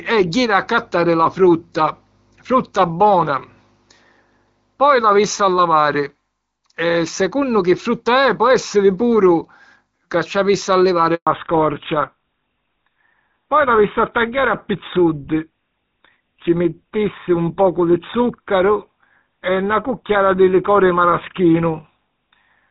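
At 11.15 s the speech cuts out in a handover gap lasting 120 ms, until 11.27 s. The call is being passed from one network to another, and during the switch no speech frames reach the receiver. The voice decays within a few tens of milliseconds into silence, and whatever was said in that window is lost. The silence lasts until the new link starts.

From 11.27 s to the end, the call is in fallback to narrowband. Before the handover, the wideband HD Voice path carries the speech with only light codec colouring, in line with AMR-WB at 12.65 kbit/s. After the gap, everything above 4 kHz is missing. The speech loses its sibilance and airiness and takes on a duller, rougher, boxier quality, which points to a drop to the older GSM full-rate codec at 13 kbit/s.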